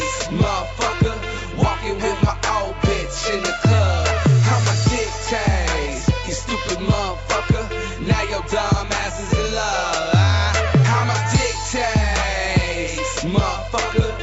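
There are no technical faults to describe in time order.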